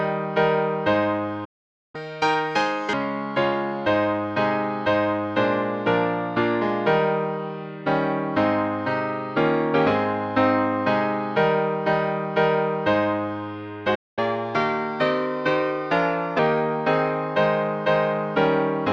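At 1.44 s the sound stops dead for about 0.49 s, until 1.95 s. This is a playback stall, most likely the player running short of buffered data or its output thread being held up. Unlike a dropout, which cuts a section out, the sound picks up where it halted. The same thing happens at 13.95 s, this time for about 0.22 s, ending at 14.19 s.

Each stall is followed immediately by catch-up at higher speed, as the player works through its backlog by resampling. From 1.95 s to 2.93 s the audio runs at 1.5 times normal speed, and the pitch rises by roughly seven semitones, close to a fifth. From 14.19 s to 16.39 s the rate is 1.1 times, a lift of only about a semitone and a half. Tempo and pitch rise together and then drop back to normal. That, and its timing straight after a gap, sets it apart from a plain pitch shift.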